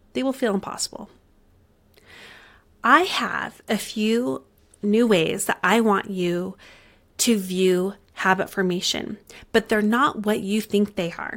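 No technical faults occur at any point in the speech.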